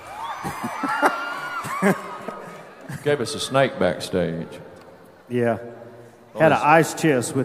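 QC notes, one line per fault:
2.28–2.30 s, 4.55 s and 6.97 s: damaged data in a compressed stream. Each is a brief chirp or blip of about 20 ms, where corrupted bytes in the encoded stream made the decoder misread those frames, lose sync and hunt for the next valid frame header.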